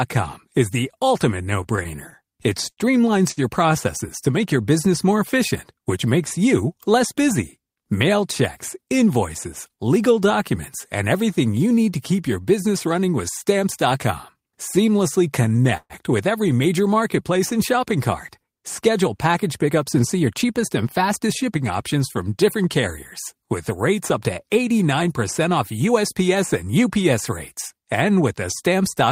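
From 1.63 to 3.40 s and again from 15.43 to 15.93 s, repeated stalls (stutter) break up the speech. The jitter buffer kept running dry, and the receiver stretched the last sound across each gap, up to 74 ms in the first run and 127 ms in the second. Nothing is lost, but the audio drags and sticks instead of dropping out. At 19.44 to 20.45 s and 25.89 to 26.74 s, jitter buffer speed-up trims about a tenth of a second and then somewhat less. The speech runs at 108% and sounds hurried, yet the pitch stays the same, unlike a resampling error.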